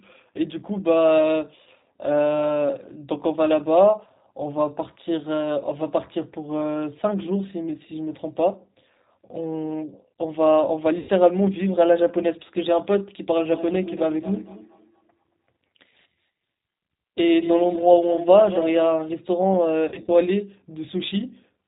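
Plainly audible G.729 codec damage runs throughout. Nothing above 4 kHz survives. The speech sounds rough and synthetic, which fits 8 kbit/s coding.

At 10.99 to 11.1 s, VoIP packet loss concealed by the speech codec stretches the sound into a fading buzz or coloured noise. Scattered short dropouts recur from 19.88 to 20.1 s.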